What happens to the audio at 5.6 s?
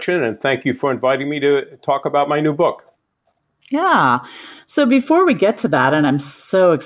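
Nothing goes wrong at 5.6 s; the speech carries on intact through that moment.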